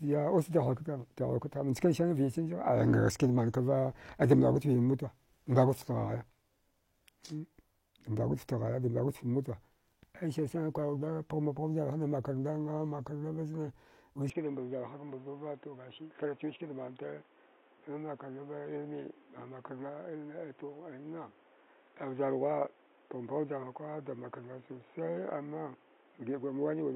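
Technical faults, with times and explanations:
14.30 s to end: likely an input switched to a poorer device. From that point the speech has nothing above 3.8 kHz, drops about 5 dB in level and carries a new noise floor roughly 30 dB below it, with no gap at the change, as a narrower-band microphone or headset would produce.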